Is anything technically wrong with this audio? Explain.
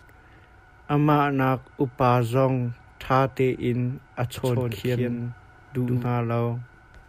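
Yes. From 4.38 to 6.06 s the speech gains a hard, dry echo: a full-band copy trails around 150 ms behind, about 5 dB quieter, cutting in and out abruptly. This doubled audio track likely comes from a slower second capture path mixed back in.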